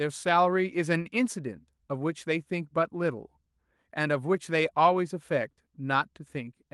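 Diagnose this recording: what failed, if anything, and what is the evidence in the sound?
A short stall from a late packet occurs at 1.01 to 1.07 s in this speech. A packet arrived late over the network, the jitter buffer ran dry, and the receiver stretched the last sound for about 35 ms before resuming where it stopped. Nothing is lost, but that moment is held slightly too long.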